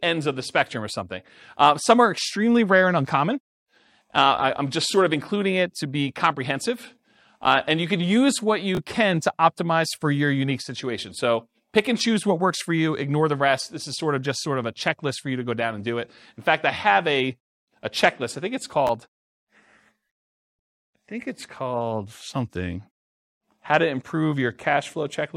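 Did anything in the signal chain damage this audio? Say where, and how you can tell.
Yes: chunks out of order at the buffer stage. Ten-millisecond blocks play late, two positions after "you can use what" (8.75–8.78 s) and one after "checklist I think it's" (18.87–18.89 s), giving jumbled blips.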